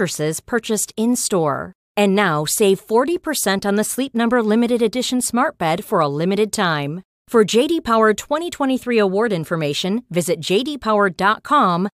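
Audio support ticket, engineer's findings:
No faults found in this speech clip, so the engineer's findings have nothing to report.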